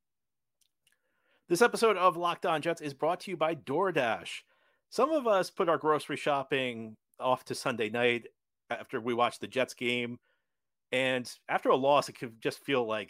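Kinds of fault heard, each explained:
No kinds of fault are heard in this speech clip.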